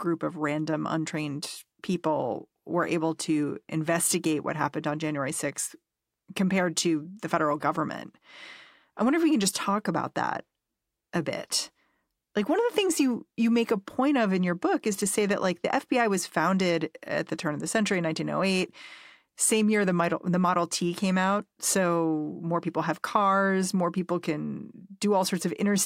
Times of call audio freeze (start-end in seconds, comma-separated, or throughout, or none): none